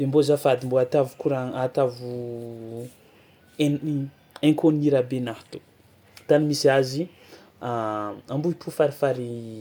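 Listening through this speech recording, nothing stands out that would call for comment.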